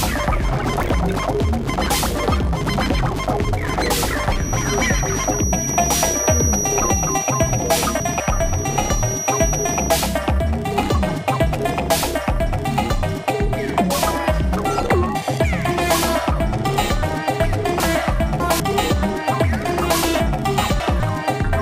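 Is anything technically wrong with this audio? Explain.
Yes, two kinds of fault can be heard.

Feedback whistle, from 4.32 to 10.0 s: a thin, steady tone at 5.8 kHz sits behind the sound, only a little below its level, and swells and fades slowly in loudness. Its likely cause is a loudspeaker-to-microphone loop held right at the edge of feedback, so one high frequency keeps ringing without building into a full howl.

Chunks out of order, at 7.6 to 8.2 s, 17.8 to 18.6 s and 20.2 to 21.0 s: each passage sounds briefly jumbled. A 200 ms block of audio turns up late and plays after material that should follow it. In the first case it lands about two chunk-lengths behind its place, and in the later two about three.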